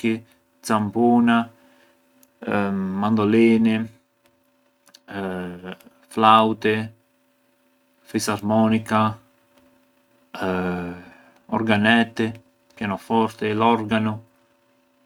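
Nothing in this speech clip stands out as a technical fault, so there's nothing to flag along the way.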